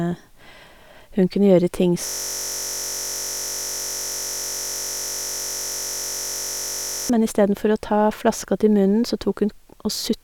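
From 2.07 s to 7.10 s a system hang loop replaces the speech: the driver stalled while the hardware kept replaying one 21.33 ms slice, which fits a 1024-sample ring buffer. It sounds like a steady 46.9 Hz buzz until "men istedenfor".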